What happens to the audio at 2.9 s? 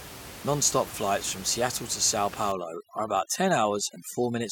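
At 2.9 s the sound is inside a stretch of overdone noise removal that runs from 2.52 s to the end of the clip. A noise reducer set too hard cuts individual frequency bands whenever they sit near its noise estimate, and with room noise only about 15 dB below the speech, quieter parts of the voice get cut too. The gaps fill with near silence and twinkling specks. Unlike a noise gate, it removes bands one at a time instead of muting everything at once.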